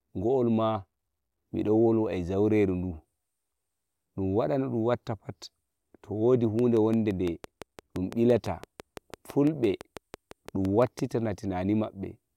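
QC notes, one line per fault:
6.59 to 11.0 s, train of clicks: just after "to wodi", a steady ticking starts and runs to 11.0 s, about thirty near-identical clicks at a regular 5.9 per second. They stand out roughly 10 dB above the speech and stay audible in the pauses, which shows they come from something added to the signal rather than from the talker. The even spacing and matching shape point to a repeating pulse, likely interference from nearby equipment or a faulty connection or power supply.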